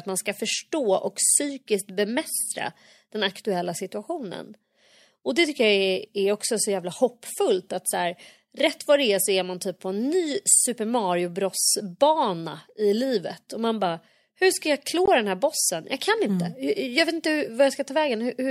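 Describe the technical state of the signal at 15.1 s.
Right around 15.06 s there's a block of digital silence, about 20 ms where the speech cuts out abruptly and back, so it lands as a short hole.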